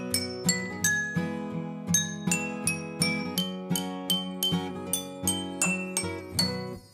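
No technical faults can be heard anywhere in the audio.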